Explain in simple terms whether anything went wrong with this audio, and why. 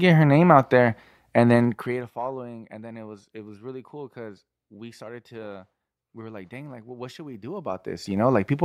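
Twice the speech picks up a fast ticking, like a zip being pulled. It first comes from 1.54 to 2.13 s, right after "name out there and", as the sound drops sharply. It comes again from 7.31 to 8.31 s, after "like well what should", as the level climbs back. This is zipper noise: the volume was moved in small jumps, about 15 to 20 per second, instead of gliding, and each jump leaves a tiny click.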